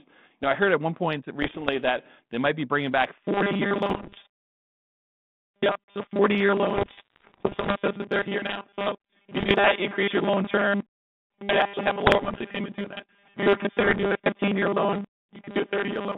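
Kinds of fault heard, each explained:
Bit errors on an ADPCM link: flipped bits throw the decoder's step size and predictor off, so each error rings on as pops and rough bursts with brief level jumps. Six bursts occur between 1.42 s and 14.07 s, the longest from 6.76 to 7.73 s.
Robotic sound from repeated short buffers: from 3.24 s to the end, the speech turns into a rigid, metallic 200 Hz buzz, which fits the last 5 ms being replayed while most of the real audio is skipped, likely because new audio arrives too seldom.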